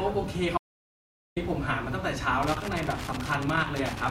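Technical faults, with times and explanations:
0.58–1.36 s, audio dropout to silence: the speech cuts to dead digital silence with no room tone for about 0.79 s, likely a lost input while recording continued.
2.43 s to the end, loose connector crackle: irregular crackling and scratching rides over the speech as a worn contact rapidly breaks and remakes the signal path.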